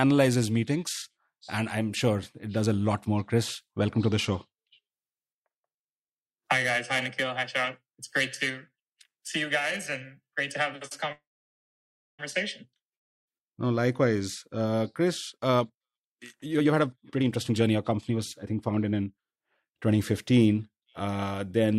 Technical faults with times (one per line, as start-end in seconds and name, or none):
11.12-12.21 call audio freeze
15.37-19.40 jitter buffer speed-up